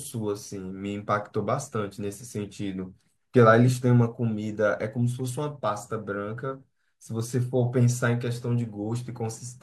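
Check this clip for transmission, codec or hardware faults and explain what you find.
No transmission, codec or hardware faults.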